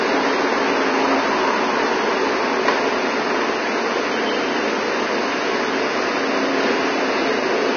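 Throughout, the sound is hissy and grainy, with nothing above 6.5 kHz; likely heavy Vorbis compression at a low bitrate, its coarsely quantised treble turned to noise.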